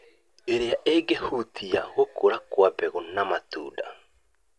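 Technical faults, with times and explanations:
No technical faults can be heard in this speech clip. Nothing in the recording calls for a time or an explanation.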